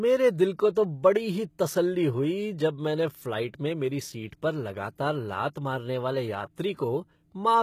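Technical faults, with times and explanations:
Throughout: HE-AAC compression is the likely cause of the plainly audible coding damage. The upper spectrum sounds synthesised, not captured. Copied-up lower bands fill the treble under a coarse envelope, so sibilants come out gritty and metallic, and the harmonics fail to line up above the crossover. The damage fits a very low bitrate of around 20 kbps. On a spectrogram the treble looks blocky and repetitive, and there is a hard ceiling with nothing above 14.9 kHz.
0.75 s: pre-echo just after "दिल को". A short hiss arrives about 13 ms before a sharp onset, and the attack itself sounds softened and smeared. The transform spreads quantisation noise across its whole block, so noise sized for the loud onset also spills into the quiet moment just ahead of it. On a waveform, a thin fuzzy band of low-level noise leads the transient. On a spectrogram it shows as a brief broadband smear just before the attack.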